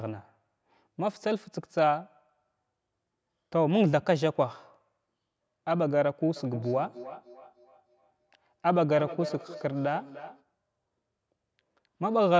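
A speech recording whose spectrogram stops cleanly at 8 kHz, with the lowest bass trimmed by the call's microphone processing, carries feedback echo between two devices from 6.36 to 10.44 s. The speech returns at intervals of roughly 300 ms, peaking about 17 dB below the direct speech. A second device in the same room replays the call and its microphone picks that playback up again, which neither device's echo canceller can remove. On a spectrogram, each syllable trails faint copies displaced to the right by that spacing. The waveform shows smaller ghost envelopes following each burst.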